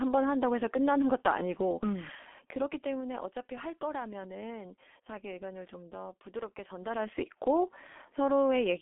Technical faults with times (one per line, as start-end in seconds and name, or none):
0.00-8.82 G.723.1 codec